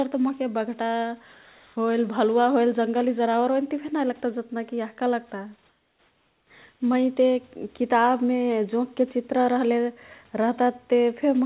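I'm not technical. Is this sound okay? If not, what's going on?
No. Twice, from 1.34 to 1.76 s and from 5.69 to 6.5 s, the call system likely stopped sending sound during a pause in the speech, and the receiving end filled the gap with comfort noise in place of the background. The real room sound is swapped for a smooth, featureless hiss that is a little quieter, so the background seems to flatten and dip briefly before the real room sound returns.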